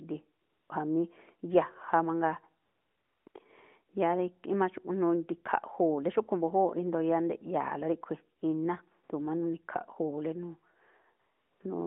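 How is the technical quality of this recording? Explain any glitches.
The speech carries AMR comfort noise dropouts in several pauses, heard through narrowband mobile coding limited to about 200 Hz to 3.5 kHz with light codec damage. The comfort noise appears at 0.42–0.70 s, 2.64–3.26 s, 3.28–3.34 s, 8.40 s, 9.04–9.10 s and 11.20–11.60 s. In each gap the phone judged the talker silent and sent no speech frames, so the receiver synthesised a smooth, steady hiss from a rough level-and-spectrum sketch in place of the real background. On a spectrogram these stretches show as flat, featureless noise blocks switching on and off abruptly. The waveform shows an even low-level floor.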